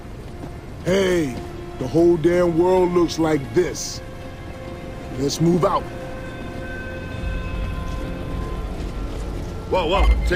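No technical faults can be heard anywhere in the clip. Nothing in the sound points to a problem with how it was captured or delivered.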